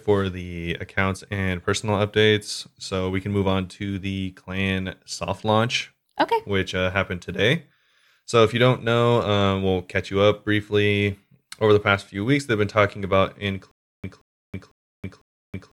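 From 13.71 s, after "they've been talking about", a stutter with silent gaps runs to the end. One 177 ms fragment returns four times every 500 ms, with 324 ms of digital silence between, likely a stalled stream replaying its last buffer. Waveform: identical blocks, flat gaps.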